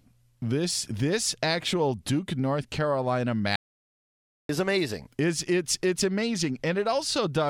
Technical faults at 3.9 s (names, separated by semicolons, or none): audio dropout to silence